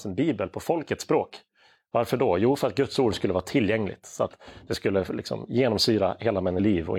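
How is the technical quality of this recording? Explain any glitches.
One glitch occurs near the end of the speech. From 6.55 to 6.60 s, damaged data in the compressed stream produces a brief disruption as the decoder loses frame sync and jumps to the next valid header.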